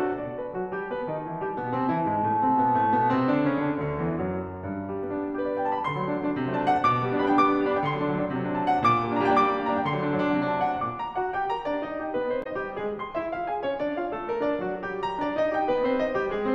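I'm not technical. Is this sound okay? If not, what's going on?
No. At about 12.40 to 12.47 seconds the music briefly breaks into a short chirp, squawk, click or gap. This is damaged data in a compressed stream: part of the file was corrupted, so the player misread that moment and had to find its place again.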